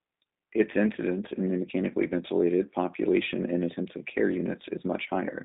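G.729 coding runs throughout the clip, and the audio sounds like it passed through a G.729A link at about 8 kbit/s. Speech is rebuilt from a vocal tract model and a few pulses per frame, leaving it rough and synthetic. The band is confined to roughly 150 Hz to 3.7 kHz.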